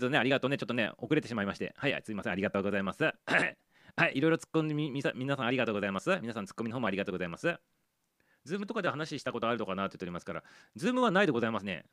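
No technical faults can be heard anywhere in the recording.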